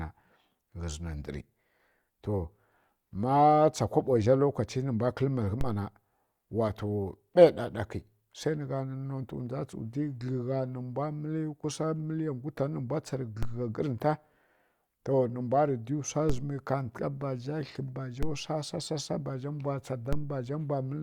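Speech clip with DC steps at 5.61–13.43, 16.30–18.23 and 20.13 s to the end: the zero line jumps by about −21 to −19 dBFS, giving low thumps at each shift.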